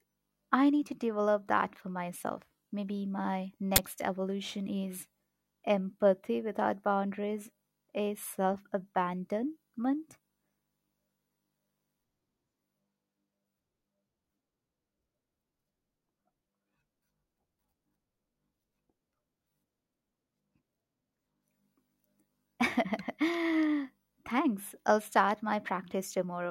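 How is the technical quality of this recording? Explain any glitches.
The recording has one clear glitch, an uninitialised buffer, at 3.76 to 3.78 s, just before "evolution is". A 20 ms block played out before any audio was written into it, so leftover memory became samples. You hear a short, harsh burst of digital noise; a waveform shows a sudden dense slab, and a spectrogram shows a bright vertical band across all frequencies.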